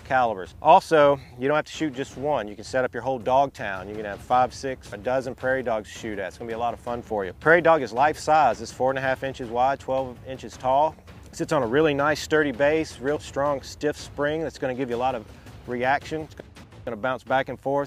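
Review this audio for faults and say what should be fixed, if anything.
No faults turn up anywhere in the recording, so nothing needs fixing. The audio can be used as it stands with no repair or prevention step required.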